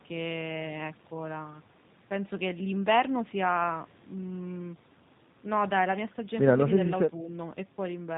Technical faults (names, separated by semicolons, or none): G.729 codec